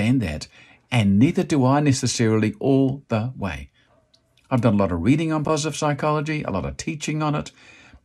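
From 5.44 to 5.50 s, between "lot of reading on" and "psychology a lot of", frames arrived out of order: two neighbouring runs of frames were decoded swapped, so this roughly 50 ms stretch of speech plays with its halves exchanged. It comes across as a brief garbled flutter, and no time is lost.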